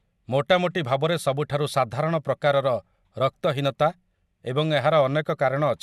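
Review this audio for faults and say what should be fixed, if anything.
Nothing needs fixing: no technical faults can be heard in the speech recording.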